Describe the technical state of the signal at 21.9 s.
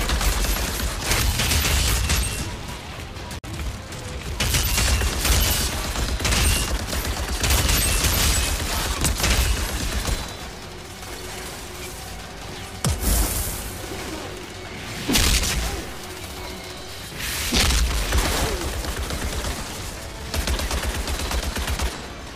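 At 21.9 s the signal is intact, with no dropout, clipping, glitch or other fault audible there.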